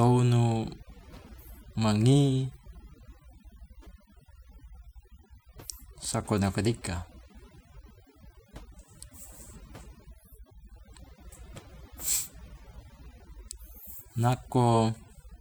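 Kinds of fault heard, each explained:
Mains hum: A steady low tone at 60 Hz sits under the speech for the whole clip, roughly 25 dB below it. It comes from the power line leaking into the signal, through a ground loop or a nearby transformer. It is most obvious in pauses, where it drones on alone. A spectrogram shows an unbroken horizontal line at 60 Hz from start to end. The waveform's quiet stretches carry a fine regular ripple instead of a flat trace.
Overdone noise removal: Noise reduction was pushed too hard. Any frequency band it judged close to the noise level was cut deeply or removed, and the quieter parts of the speech were taken with it. The background noise between phrases drops away and breaks up into brief twinkling specks. On a spectrogram the background is dark, with scattered isolated dots and ragged, hollowed-out edges around the speech energy. The waveform's background noise drops sharply between phrases.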